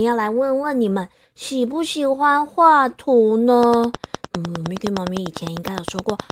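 Speech recording with a train of clicks running from 3.63 s to the end of the clip. The clicks arrive at a steady 9.7 per second, evenly spaced and nearly identical in shape, and they peak about 15 dB above the speech, so they sound like a sharp ticking over the talker that continues through the pauses. Such a regular, repeating pulse is likely interference from nearby equipment or a faulty connection or power supply injecting a transient at a fixed rate.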